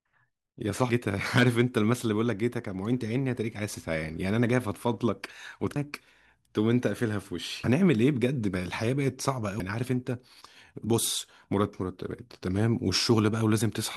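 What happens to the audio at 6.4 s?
Nothing goes wrong at 6.4 s: the speech carries on intact through that moment, with no dropout, click, distortion or other fault.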